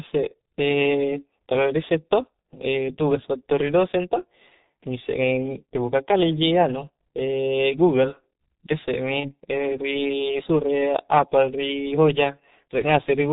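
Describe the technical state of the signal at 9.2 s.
At 9.20 s there's a dropout handled by VoIP packet loss concealment from the speech codec, running to about 9.34 s. The decoder extrapolated from its last pitch and filter while fading the gain, so you hear the sound briefly stretched and smeared as it fades, and it doesn't fully recover for a while. The gap fits a single lost 30 ms frame.

All of this sits on top of heavy G.723.1 codec damage across the whole clip. It sounds muffled, with nothing above 4 kHz, plus hoarse texture and blurred consonants, which fits the codec's roughly 6.3 kbit/s mode with 30 ms frames and a slowly updated voice model.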